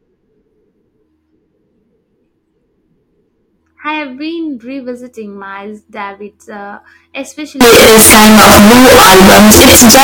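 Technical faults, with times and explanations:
7.61–10.04 s, signed and unsigned mixed up: the 16-bit samples were likely read with the wrong sign convention, flipping the top bit, so every zero crossing becomes a full-scale jump. This gives loud, harsh distortion to the end, with quiet moments as loud as everything else.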